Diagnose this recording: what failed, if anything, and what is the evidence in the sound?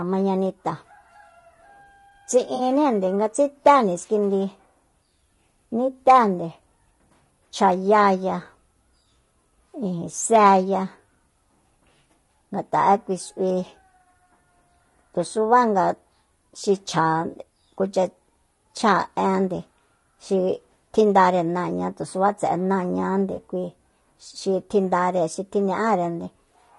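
The codec stage is the problem throughout. The speech is rough and grainy for the whole recording. Noise sits between the harmonics, and the top band sounds thin and synthetic. The likely cause is low-delay AAC compression, AAC-ELD, at a low bitrate. The damage is plainly audible and fits roughly 32 kbps. At so low a bitrate the encoder has too few bits for clean tonal detail, so noise fills in between the harmonics.

There is also AAC frame loss with concealment, at the network or decoder stage. A smeared, phasey patch appears from 2.55 to 2.61 s, about 40 ms, which fits two lost frames. Shorter patches of about 20 ms each occur from 17.31 to 17.35 s and from 23.35 to 23.39 s, each matching a single lost frame. In each gap the decoder rebuilt the missing audio from the last good spectrum, which leaves a brief noisy blur.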